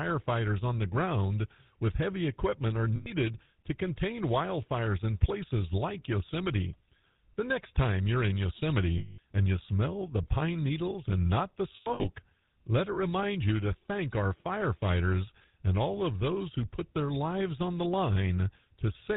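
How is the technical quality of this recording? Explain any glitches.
Quality is held back by plainly audible codec damage across the whole speech clip, plus three short dropouts where the codec patched over missing data.

GSM full-rate codec: This runs from start to finish, and the sound points to the old GSM full-rate coder at 13 kbps. It models the vocal tract as a filter and excites it with a regularly spaced pulse train that keeps only every third sample, and nothing gets through above 4 kHz. What you hear is a muffled top end and that buzzy, gravelly grain all through the speech.

Lost GSM frames: The first comes at 2.96 to 3.12 s, right after "with heavy equipment are" and before "to contain wildfires in", and covers about 100 ms. The second runs 8.98 to 9.19 s, about 200 ms, ending just before "and you smell the". The third starts at 11.76 s, after "needles and not the", and is broken up. 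About 200 ms is lost in pieces over roughly 280 ms, up to 12.06 s, and the longest single gap is around a tenth of a second. In each case the decoder kept repeating the last good frame's settings, so the gap gets filled with a rough, metallic ringing tone.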